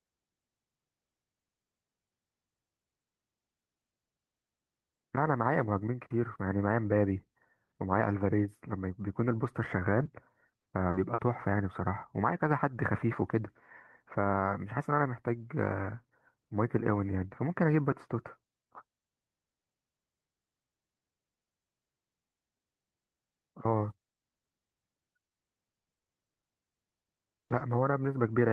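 From 9.71 to 11.20 s, and again from 25.80 to 27.62 s, the speech turns choppy and robotic: repeated packet loss, with short gaps of up to 60 ms patched by stretching the previous sound, about 12% of each stretch.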